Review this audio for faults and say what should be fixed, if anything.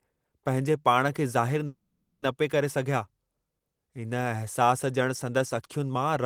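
From 1.66 to 2.23 s the speech stalls: the last sound is stretched into a fading buzz and then near silence, before speaking resumes exactly where it broke off, now about 0.56 s later. This call audio freeze likely comes from delayed packets emptying the jitter buffer. A steadier network path or a deeper adaptive jitter buffer would prevent it.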